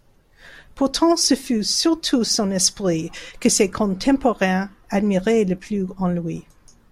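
No technical faults can be heard anywhere in the speech.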